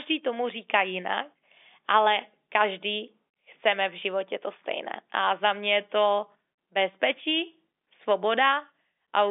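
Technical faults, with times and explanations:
No technical faults turn up in the speech; it carries the narrow band of G.711 telephone coding, roughly 250 Hz to 3.6 kHz with nothing above 3.7 kHz, and any coding noise sits faintly beneath the signal.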